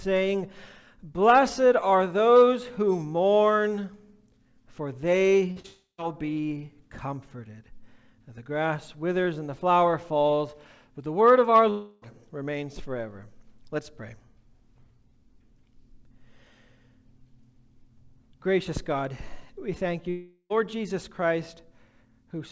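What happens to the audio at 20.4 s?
At 20.4 s the sound sits inside a gap from 20.10 to 20.52 s, likely a long network dropout. For about 0.4 s no audio arrives, and the receiver stretches the last sound into a fading buzz or hiss. Only the final 20 ms falls fully silent before the audio resumes with the lost part gone. On a spectrogram this shows as smeared, repeating bands that dim over the span, capped at 8 kHz like the rest of the call. A waveform shows a decaying envelope ending in a brief flat line.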